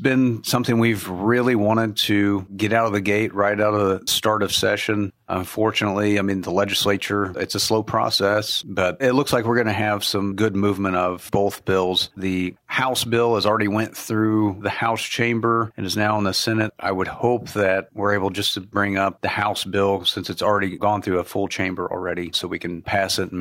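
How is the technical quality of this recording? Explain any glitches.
The technical quality holds up, with no glitches to explain in this recording.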